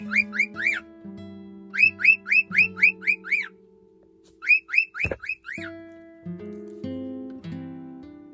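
The signal carries no audible technical faults at any point.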